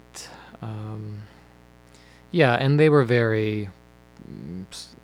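Mains buzz runs through the whole speech clip, built on a 60 Hz supply. Sharp switching spikes from a dimmer, rectifier or unshielded lead enter twice per cycle, spraying harmonics into the kilohertz range and leaving a steady, raspy buzz about 30 dB beneath the speech.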